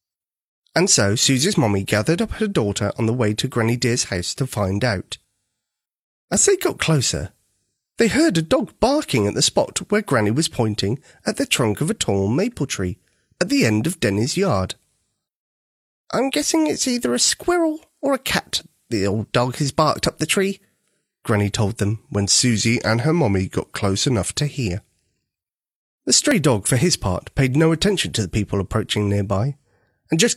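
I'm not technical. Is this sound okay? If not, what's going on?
No. Overlap between stream segments: the audio arrives in 4-second pieces whose edges overlapped, so a sliver was cut, causing tiny clicks or skips at 6.34, 14.30, 18.31 and 26.31 seconds.

From 22.41 to 24.32 seconds, a likely drift correction step, where playback suddenly ran about 6% slow, drops the speech about a semitone lower before it snaps back.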